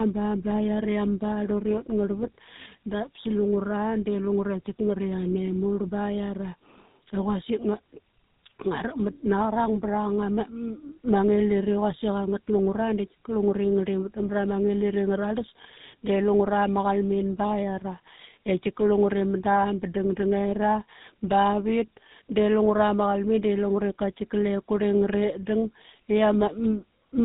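From start to finish the speech carries tandem speech coding. It sounds rough, muffled and warbly, consistent with two speech codecs in a row, such as an AMR-NB link passed through G.711 into GSM full rate. A spectrogram shows a hard ceiling at 3.8 kHz with smeared, blurry formants.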